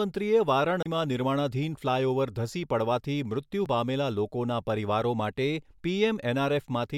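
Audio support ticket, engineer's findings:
CD skip, 0.83–0.86 s: pickup laser jumped to another turn of the spiral; brief mute of about 30 ms, then playback resumes elsewhere, just before "નિર્માણાધીન ફ્લાયઓવર ધસી પડવાથી".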